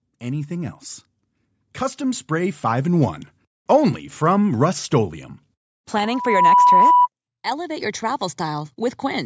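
Speech with automatic gain rising twice: the level and background swell together, about 3 dB from 0.06 to 0.87 s and about 6 dB from 1.59 to 3.11 s before "only from", as the gain control lifts a quiet input.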